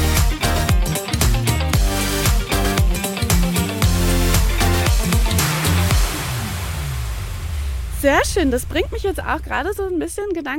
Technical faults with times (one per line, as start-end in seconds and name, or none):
0.81-4.06 mains buzz